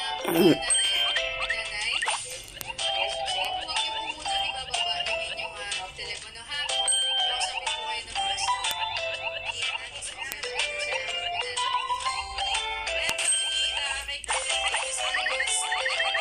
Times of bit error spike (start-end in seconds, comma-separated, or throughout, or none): 2.61, 3.45, 4.39, 8.71, 10.32, 11.95, 13.09